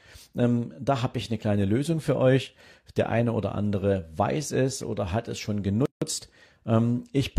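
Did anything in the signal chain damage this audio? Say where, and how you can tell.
Yes. At the codec stage, there's a gap at a join of encoded pieces: right after "oder hat es schon", the speech drops out from 5.86 to 6.02 s, a gap of about 160 ms, then resumes mid-flow. The pieces were encoded separately and butted together untrimmed, so leftover encoder delay and last-frame padding sit in the middle.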